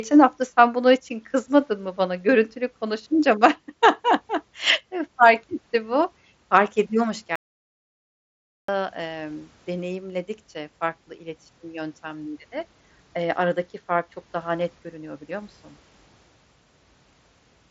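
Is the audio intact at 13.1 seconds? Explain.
Yes, the speech is intact at 13.1 seconds, carried through the Bluetooth mSBC headset path with nothing above about 7.7 kHz.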